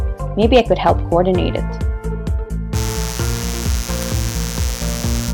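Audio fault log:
2.72 to 5.34 s, mains buzz. A steady, raspy buzz enters at 2.72 s and holds to the end. It sits fairly close under the main sound, roughly 10 dB down. The fundamental is 60 Hz. Sharp switching spikes, like those from a dimmer, a rectifier or a missing shield, get into the signal path twice in each mains cycle. Those spikes carry a long series of 60 Hz harmonics up into the kilohertz range. That dense harmonic stack makes it sound gritty, not like a smooth hum.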